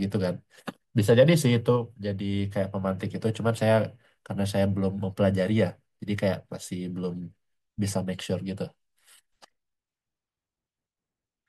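No technical faults are audible.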